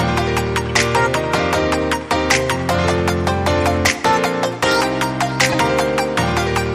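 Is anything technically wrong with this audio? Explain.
Yes. Corrupt frames were decoded and played at three points. They occur at 0.67 s, at 3.62 s, and from 5.52 to 5.54 s. Each hit spans a couple of frames. Flipped bits in the compressed data made the decoder misread gains or codes. That put energy at the wrong frequencies for the length of the damaged frames. Each is heard as a brief chirp, squeak, blip or burst of noise. The last one is loudest, peaking at about -10 dBFS.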